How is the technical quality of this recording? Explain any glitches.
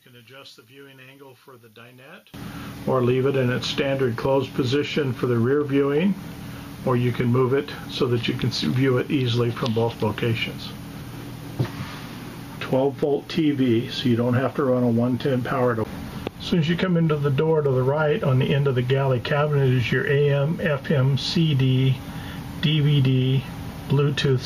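The recording has two clear problems. Right through the clip there's gain pumping: the level ducks by around 10 dB under loud moments, likely a limiter fighting excessive gain. From 0 to 2.34 s, one channel inverted is the likely culprit: the centre content collapses by about 31 dB in mono, leaving a faint residue.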